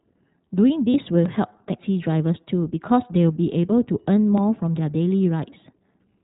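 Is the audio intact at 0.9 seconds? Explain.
No. From 0.90 to 0.96 s there are lost iLBC frames. About 40 ms of audio is missing, which fits two dropped 20 ms frames. The decoder fills the hole by repeating the last pitch cycle and mixing in noise. The result is a brief held tone, slightly buzzy and breathy, in place of the real sound. Each iLBC frame decodes independently, so the sound is correct again right after the gap.

The whole clip also carries the iLBC codec, and its damage is plainly audible at this point too. This narrowband codec passes nothing above 4 kHz, so the speech sounds muffled and lacks its upper detail. The codec codes each 20 ms frame's excitation on its own, which adds a slight rough, synthetic quality. The coding fits iLBC's 15.2 kbps mode.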